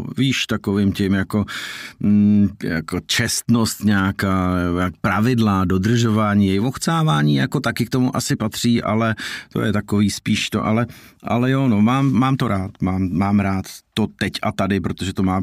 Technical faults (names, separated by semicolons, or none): none